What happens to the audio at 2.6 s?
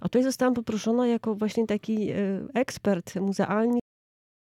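Nothing goes wrong at 2.6 s; the audio carries on there without any dropout, click, distortion or other fault.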